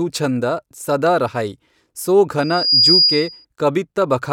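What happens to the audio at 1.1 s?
Nothing goes wrong at 1.1 s; the speech continues intact through that moment with no dropout, click or distortion.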